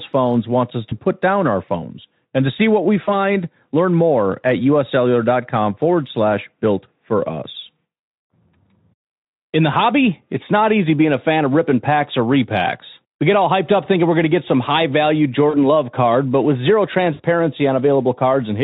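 VoIP packet loss concealed by the speech codec breaks the speech five times. At 0.89 s a gap of about 20 ms is filled. After "to see what we", from 3.03 to 3.10 s, the fill lasts about 40 ms. At 7.97 s another 20 ms gap appears. After "get some high value", from 15.49 to 15.56 s, about 40 ms is patched. After "card but with zero", from 17.13 to 17.22 s, about 60 ms is patched. Each time the Speex decoder repeats its last pitch and spectral shape with falling gain. The result is a brief buzzy tone or coloured noise that fades.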